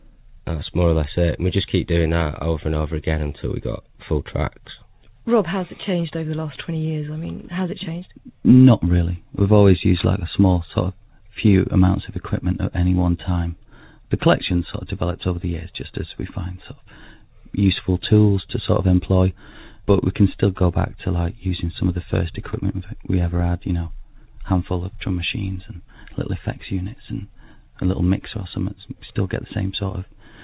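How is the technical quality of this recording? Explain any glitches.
No glitches anywhere.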